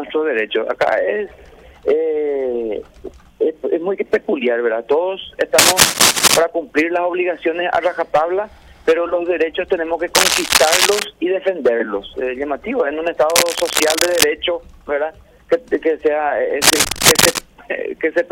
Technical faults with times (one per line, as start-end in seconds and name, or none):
5.58-6.39 cable scratch noise
10.15-11.03 cable scratch noise
13.30-14.24 cable scratch noise
16.62-17.39 cable scratch noise